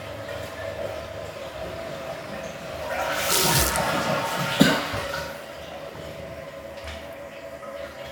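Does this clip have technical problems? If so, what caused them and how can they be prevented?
No, nothing stood out on listening to these sounds, so there is nothing here that needs preventing.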